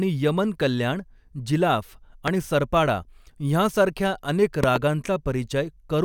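At 2.28 to 2.30 s, just after "यमन कल्याण जिलाफ", a single loud pop sits roughly 20 dB above the speech. From 4.64 to 4.78 s, after "सरपाडा ह्यांसारख्या अनेक", a pair of pops about 15 dB above the speech follow in quick succession. The speech carries on underneath both events. A brief voltage step, likely from a switch, plug contact or static discharge, was added to the signal, and the downstream circuitry shaped each step into a sharp thump.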